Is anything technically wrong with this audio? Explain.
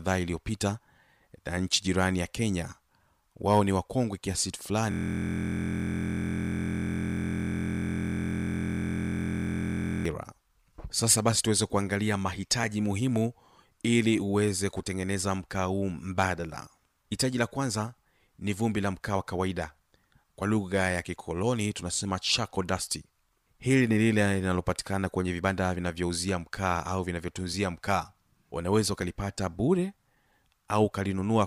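Yes. From 4.91 to 10.06 s a system hang loop occurs: the driver froze while the hardware kept replaying one 23.22 ms slice, which fits a 1024-sample buffer. The result is a steady 43.1 Hz buzz. Unlike mains hum, its timbre is the frozen sound itself, repeated exactly.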